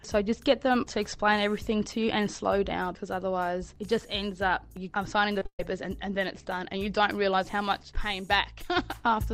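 From 5.34 to 5.60 s there's repeated packet loss: four quick gaps, the longest 130 ms, patched by stretching earlier sound, so it turns choppy and robotic.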